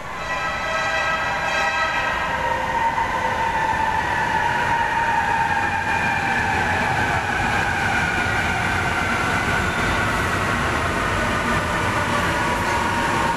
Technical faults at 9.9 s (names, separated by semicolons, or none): none